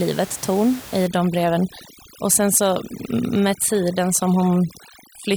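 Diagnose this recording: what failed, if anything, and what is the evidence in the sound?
The failure sits in call processing: overdone noise removal from 1.07 s to the end at 5.36 s. The room noise, about 18 dB below the speech, drops and breaks up into twinkling specks, and quiet parts of the voice are lost as bands near the noise estimate are cut too hard.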